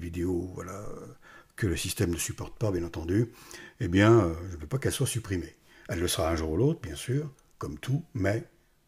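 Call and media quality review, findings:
Nothing turned up on this one: no dropouts, glitches or level jumps anywhere in the recording, so there's nothing to chase here.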